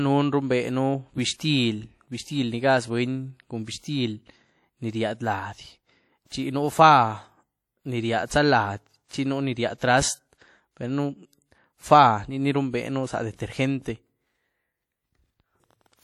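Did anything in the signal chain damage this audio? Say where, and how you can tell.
Yes. The codec stage. Ringing, washy hiss that breathes with the speech throughout points to a low-bitrate transform codec, likely WMA compression.

Pre-echo at 3.65, 6.26 and 9.05 s, before "chi nú ni ríahdy". Hiss leads each attack by 27, 59 and 57 ms. The block's noise fills the quiet before the onset.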